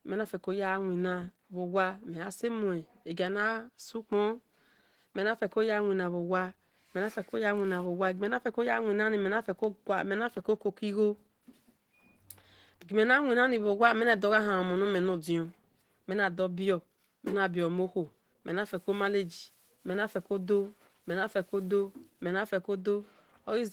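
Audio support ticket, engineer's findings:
Opus voice compression throughout. Speech muffled, hoarse, faintly robotic. Likely a low-rate Opus encoder, around 16 kbps, in hybrid mode: linear-prediction layer below 8 kHz, coarse transform layer above, excitation under-coded. Band extends to 20.2 kHz; damage plainly audible.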